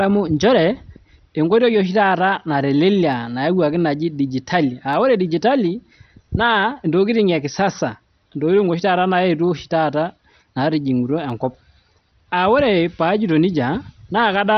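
Throughout, the speech sounds dull and gurgling, with granular, flickering bands, likely MP2 compression at a rate around 48 kbps.

At 3.13, 4.93 and 11.30 s, single sharp clicks are heard, likely dropped samples: a handful lost, making the waveform jump abruptly.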